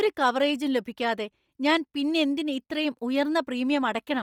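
From start to end, the speech has a breathy, grainy edge. The upper band sounds hollow and hissy. This is likely Bluetooth LC3 compression. At a low bitrate near 32 kbps, the codec zeroes much of the high spectrum and fills it with noise. The damage here is heavy.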